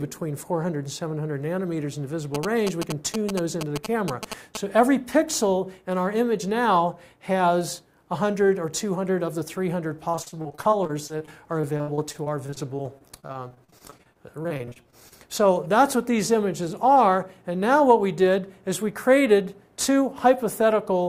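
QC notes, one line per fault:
2.35–4.57 s, GSM signalling bursts: a galloping dit-dit-dit of short buzzes at a 217 Hz repeat rate, only a few dB below the wanted sound. A nearby 2G phone was signalling, and the audio circuit rectified its radio bursts into audible interference.
10.11–15.13 s, repeated packet loss (robotic sound): dozens of short holes, the longest about 63 ms, leave the sound choppy with pieces missing. Each lost packet was patched by extending the previous sound, and roughly a fifth of this stretch is concealment rather than real audio.
16.85–17.45 s, jitter buffer speed-up: the sound runs about 5% fast at unchanged pitch and feels briefly hurried. The receiver held excess buffered audio and trimmed small pitch-period-sized pieces in succession, removing about 40 ms in total to reduce delay.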